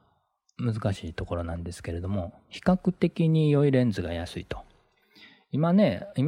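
No technical faults are audible.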